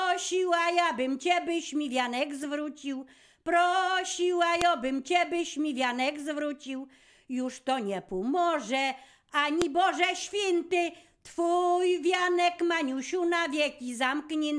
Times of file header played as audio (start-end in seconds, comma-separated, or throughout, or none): 4.61, 9.62